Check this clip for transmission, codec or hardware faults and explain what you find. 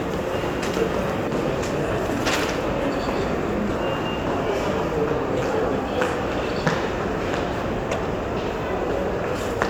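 Yep, there's one recurring problem in these sounds: a corrupt frame decoded at 1.24–1.32 s, 3.69–3.79 s and 7.91–7.97 s. Damaged compressed frames got played anyway, scattering energy to wrong frequencies, so you hear brief chirpy noise bursts peaking around -10 to -15 dBFS.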